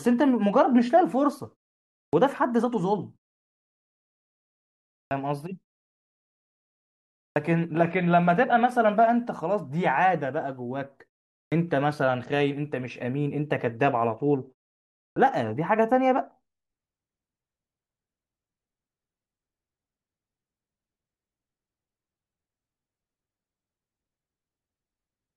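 The output device drops into a low-power state during silences in this speech clip and needs roughly 40 to 48 ms to wake before it passes sound again, producing a clipped start after a pause at 2.09, 5.07, 7.32, 11.47 and 15.12 s. At each point the opening of the next utterance is swallowed, so speech leaps abruptly out of silence with its first sounds missing.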